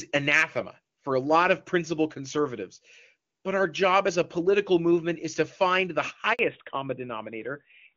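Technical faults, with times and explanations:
6.33–6.39 s, handover gap: right after "is to find the", the voice dies away within a few tens of milliseconds and stays silent for 60 ms while the call is passed from one network to another and no speech frames arrive to fill the switch. On the waveform this shows as a short, near-flat silent stretch. On the spectrogram it is a clean vertical blank band across all frequencies. Whatever was said in that interval is simply gone.
6.39 s to the end, fallback to narrowband: once the new link starts, the audio no longer has the airy, crisp top it had before the break, where the HD Voice wideband coding reached up to about 7 kHz. Nothing above 4 kHz survives, which points to a drop from AMR-WB at around 23.85 kbit/s to AMR-NB at around 12.2 kbit/s. The result sounds duller, boxier and rougher. A spectrogram shows the energy above 4 kHz ending in a sharp horizontal ceiling from this point on.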